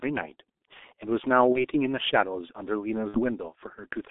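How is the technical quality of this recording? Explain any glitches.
The technical quality is poor: the speech is heavily degraded by a low-rate telephony codec for the whole recording, and two brief packet-loss dropouts interrupt it.

G.723.1 codec, throughout: The audio is confined to roughly 250 Hz to 3.6 kHz. The codec rebuilds the voice coarsely from 30 ms frames at a rate that fits about 6.3 kbit/s. The result is muffled, hoarse speech with smeared consonants. A spectrogram shows an empty region above 3.6 kHz and blocky, blurred formants.

VoIP packet loss concealed by the speech codec, 1.52–1.61 s and 3.08–3.21 s: Packets went missing, which fits one lost 30 ms frame and then two (60 ms). The decoder filled each gap by repeating its last pitch and filter at falling gain. Each dropout becomes a buzzy tone or coloured noise that fades. On a spectrogram it appears as a flat, smeared stretch, and on the waveform as a decaying stretch. 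Because each frame builds on the last, the weakened sound lingers past the gap.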